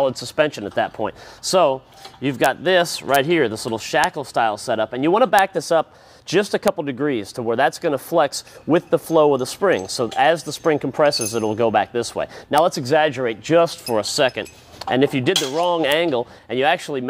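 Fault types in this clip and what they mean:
Integer overflow: loud peaks ran just past the top of the integer range and wrapped round to the opposite sign instead of being held at the limit. The result is brief, violent cracks, much sharper than clipping, at 2.44, 3.15, 4.04, 5.39, 6.68, 12.58 and 15.92 s.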